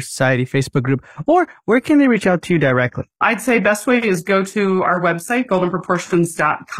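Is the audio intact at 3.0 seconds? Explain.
No. At 3.0 seconds the clip is inside a stretch of adaptive stream at a lower bitrate, running from 1.12 s to the end. The stream switched abruptly, with no gap, from a fuller-quality encoding to a much leaner one, which fits a drop from around 96 kbit/s AAC to roughly 20 kbit/s HE-AAC. The speech loses its top end, with nothing above 14.9 kHz, while codec artefacts rise.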